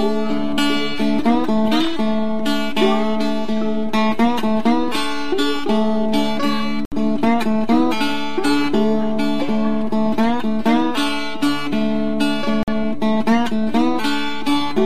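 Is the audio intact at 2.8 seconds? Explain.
Yes, the audio at 2.8 seconds is intact, with no dropout, glitch or other fault.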